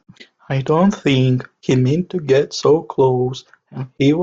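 Speech recording with no technical faults detected at any point.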